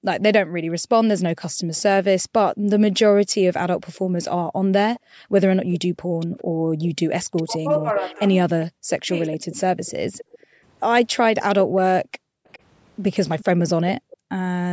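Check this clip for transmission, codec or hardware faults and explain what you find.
The speech in this clip shows three echo-canceller faults: background gating, echo leakage and double-talk suppression. The clip passed through normal call microphone processing, with nothing above 8 kHz.

Background gated by the echo canceller appears from 0.86 to 6.72 s, 10.29 to 12.46 s, and 14.0 to 14.3 s. While the loudspeaker played, the canceller clamped the microphone down by about 40 dB. The room sound dips or vanishes, for roughly two seconds in total in the first stretch, about half a second in the second, and 0.3 s in the last, then returns when the canceller releases.

An echo leak runs from 1.76 to 14.16 s: a delayed copy of the speech, trailing by 405 ms and sitting around 20 dB below the main voice, sounds back. The likely cause is a loudspeaker-side echo canceller failing to remove everything its microphone caught and sending the residue back.

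Speech suppressed in double talk occurs between 7.35 and 9.1 s. The voice drops deeply, for about a second in total. This is likely the canceller, unable to tell the local talker from loudspeaker echo while both sides spoke, turning everything down.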